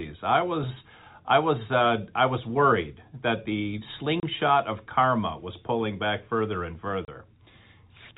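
At 4.2 s, just after "was worried that the", the speech drops out for 30 ms. The gap ends before "of karma was pulling". This is packet loss filled with silence. One chunk of audio never arrived, and the receiver played nothing in its place. The length fits a single lost 30 ms packet. The hole has hard edges. A second identical gap comes at 7.05 s, after "pulling back further and". The narrow telephone band of the G.711 line carries on around both gaps.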